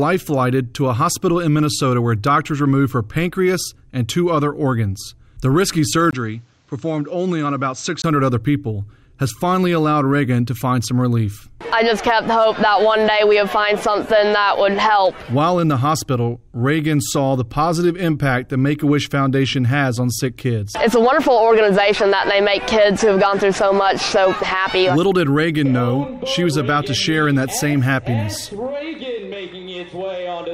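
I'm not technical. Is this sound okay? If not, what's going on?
No. From 6.11 to 8.04 s, the input likely switched to a poorer device. With a brief gap at the switch, the sound turns duller, slightly quieter and a little noisier, missing the top range above about 8.1 kHz.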